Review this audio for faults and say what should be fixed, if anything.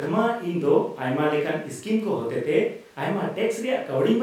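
Nothing needs fixing: the speech signal shows no technical faults anywhere in the recording.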